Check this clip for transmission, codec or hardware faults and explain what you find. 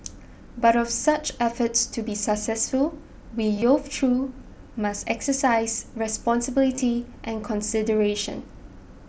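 Two short bursts of concealed Bluetooth headset packet loss, at 3.54 to 3.62 s and 6.75 to 6.82 s. Dropped headset packets were patched by repeating recent waveform, so about 45 ms and 38 ms of the speech turn briefly buzzy, with a slight warble where the real audio resumes.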